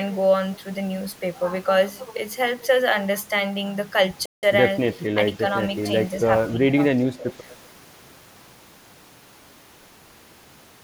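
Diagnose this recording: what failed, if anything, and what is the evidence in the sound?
At the playback stage, the player most likely ran short of data or had its output thread blocked, producing a playback stall. The speech cuts to silence in mid-flow from 4.26 to 4.43 s, a gap of about 171 ms, then carries on. The break is clean rather than noisy, which points to the output simply being starved until the buffer refilled, not to corruption of the audio itself.

In call processing, the echo canceller likely failed to tell the near talker apart from loudspeaker echo while both sides spoke, so speech was suppressed in double talk. The speech dips twice: from 6.55 to 6.75 s by about 10 dB, and from 7.10 to 7.24 s by about 15 dB. Each dip lasts only a fraction of a second, the level being pulled down while the other side talks, then released.

Also within call processing, one side's echo canceller likely left some residual of its microphone pickup, sending back an echo leak. 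At 7.50 to 7.54 s a brief delayed copy of the speech surfaces, trailing the original by 244 ms and sitting roughly 25 dB below it. It comes through as a faint, short scrap rather than a sustained repeat.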